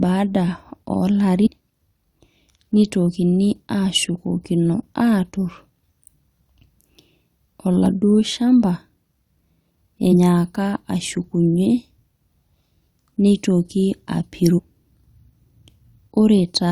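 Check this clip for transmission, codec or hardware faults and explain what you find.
Four brief bursts of damaged data in the compressed stream cut through the speech, at 1.45 to 1.48 s, 7.86 s, 10.11 to 10.13 s and 14.57 to 14.60 s. Corrupted frames made the decoder misread them, lose sync and skip ahead to the next frame header.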